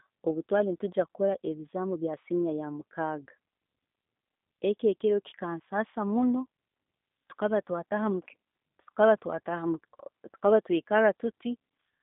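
From start to finish the speech carries plainly audible G.729 codec damage, consistent with G.729A at 8 kbit/s. The codec rebuilds each 10 ms frame from a vocal tract filter, pitch predictor and a few pulses, so speech sounds rough and synthetic, band-limited to roughly 250 Hz to 3.7 kHz, with nothing above 3.8 kHz.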